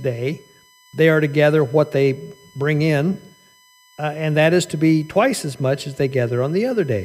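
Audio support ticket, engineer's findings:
USB whine, whole clip: USB bus current drawn in 1 ms frames leaking into the audio via power or ground. Produces a steady fixed-pitch tone at 1 kHz with its strongest component at the 2 kHz harmonic, sitting well below the speech level throughout.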